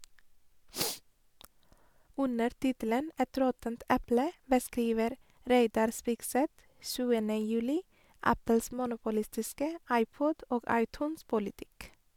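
No technical faults can be heard anywhere in the recording.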